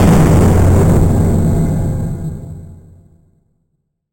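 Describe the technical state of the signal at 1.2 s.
At 1.2 s, as across the whole clip, the audio shows imaging from sample-and-hold upsampling. The 8 kHz stream was raised to 44.1 kHz by repeating samples without a smoothing filter, leaving a mirrored band from 4 to 8 kHz at about 25 dB below the signal, heard as a metallic fizz that tracks the sound's level.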